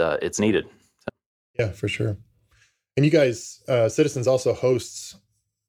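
A signal feed likely lost while the path stayed live causes an audio dropout to a faint residue at 1.10 to 1.59 s, abruptly leaving only a faint trace before "for sure".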